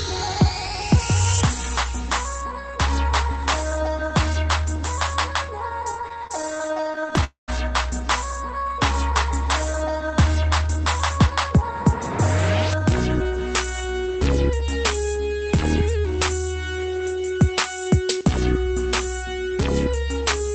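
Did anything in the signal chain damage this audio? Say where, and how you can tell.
Yes. Repeated stalls (stutter) run from 5.91 to 7.24 s: the jitter buffer kept running dry, and 27 tiny gaps of up to 26 ms were bridged by stretching the preceding sound.

A call audio freeze follows at 7.24 to 7.50 s. A 236 ms hold fades to 130 ms of silence, then the audio resumes where it stopped, likely from packets delayed in the network.

A jitter buffer speed-up runs from 13.84 to 14.62 s. The audio plays at 107% speed without any pitch change, as the receiver trims about 70 ms of pitch periods to shrink the backlog.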